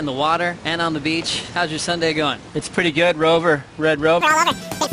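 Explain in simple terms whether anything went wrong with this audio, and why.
From 4.21 s to the end, the sound jumps to double speed and a full octave higher. That's a wrong sample rate: audio captured at roughly 22 kHz is being played back at 44.1 kHz without conversion, so everything races through twice as fast.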